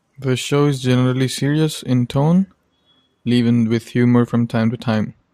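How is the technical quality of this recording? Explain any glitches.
Nothing here calls for explanation, since the speech comes across without a single glitch worth pointing out.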